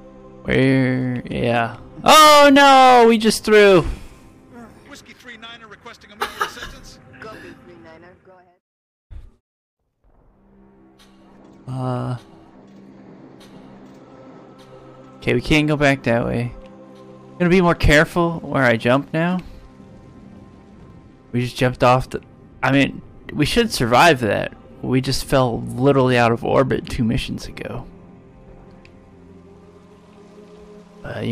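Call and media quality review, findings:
Periodic clicks every 1.83 s, 0.72 to 30.07 s. Clock drift buffer slips, likely two device clocks about 200 ppm apart; about 15 samples dropped or repeated each slip.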